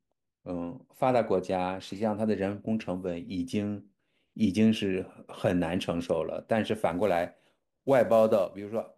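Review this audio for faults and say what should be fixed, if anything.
From 6.91 s to the end of the clip at 8.97 s, there is sample clock jitter. The converter's clock wanders by something on the order of several microseconds, so each sample is captured a little early or late. That timing error turns into an amplitude error wherever the speech waveform changes quickly, adding a rough hiss roughly 30 dB below the signal. It thickens on loud and bright consonants and drops away in pauses. To prevent it, clock the converter from a stable, low-jitter reference and keep that clock line clean and well isolated.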